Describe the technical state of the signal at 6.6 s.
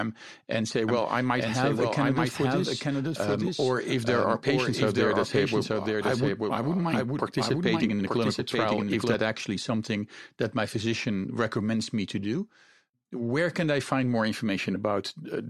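At 6.6 s the speech is running as a doubled audio track, which lasts from 0.88 s, just after "and say", to 9.14 s, just before "actually something that my". A second full-band copy trails the original by about a second, at roughly the same level, so every phrase is heard again over what follows. This is likely a duplicate capture through a slower path. Unlike echo or reverb, the copy has no decay or room colour and begins and ends abruptly.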